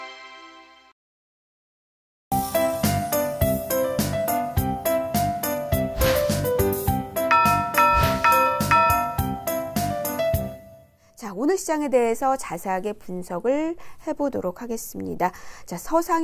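No technical faults can be heard anywhere in the audio.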